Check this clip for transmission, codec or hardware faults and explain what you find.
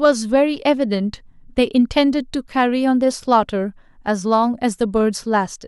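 Nothing wrong can be heard in the signal carrying this speech, which stays continuous and steady in level from beginning to end.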